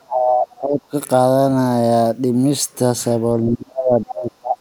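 From the start to 0.93 s the speech dips sharply and breaks up, losing around 30 dB at its deepest, which is likely speech suppressed in double talk. With both ends talking at once, the echo canceller couldn't tell this talker from the loudspeaker echo and turned both down. Between 0.51 and 0.58 s a faint scrap of a second voice, roughly 35 dB below the speech, is likely the other side's voice leaking through: the far end played on the loudspeaker and wasn't fully cancelled from the microphone. From 3.44 to 4.57 s the speech again drops out in pieces by up to about 30 dB, likely the same double-talk suppression.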